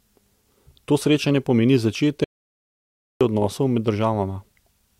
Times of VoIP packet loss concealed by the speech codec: none

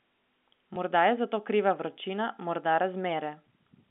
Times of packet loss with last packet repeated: 0.74-0.76

